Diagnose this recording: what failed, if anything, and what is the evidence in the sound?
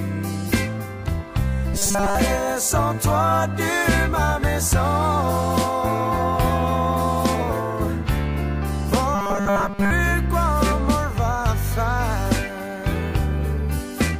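Robotic sound from repeated short buffers at 1.74–2.15 s and 9.15–9.91 s: a fixed 200 Hz buzz, likely driver-buffer underruns replaying 5 ms, not silent dropouts.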